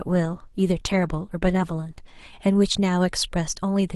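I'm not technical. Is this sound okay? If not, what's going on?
No. For the first 2.0 seconds the speech sounds dull and smeared, then it suddenly turns clearer with no gap. That is an adaptive stream starting at a low bitrate: playback began on a cheaper, lower-quality version to start quickly, then switched to a better one.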